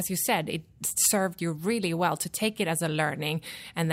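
No technical faults turn up anywhere in this bit of speech, so there's nothing to point to along the way.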